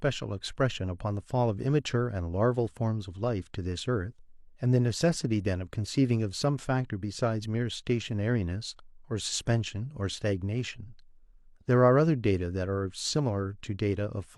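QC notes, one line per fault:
No faults were heard in the speech. Nothing in the clip needs a QC entry.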